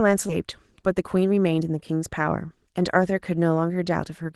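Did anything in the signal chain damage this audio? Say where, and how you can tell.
Yes. At the network and jitter buffer stage, a skip ahead at 0.29 to 0.31 s discarded roughly 0.4 s of speech, so the sound jumps forward with no gap.

The jitter buffer speed-up from 0.46 to 1.91 s trimmed pitch periods repeatedly to shed excess delay, so speech runs about 6% faster at unchanged pitch.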